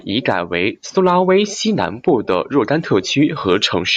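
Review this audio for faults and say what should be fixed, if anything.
No audible faults found.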